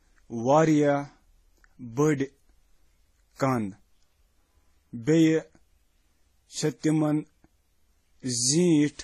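Transcoding between lossy codecs runs throughout the speech. Nothing remains above 14 kHz, and overlapping artefacts of differing character point to audio likely passed through WMA and then Vorbis before a final AAC-LC stage around 32 kbit/s, each encoder compounding the last.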